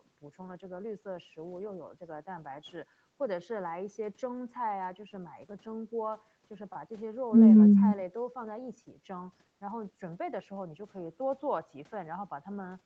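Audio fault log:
No faults heard in this speech recording.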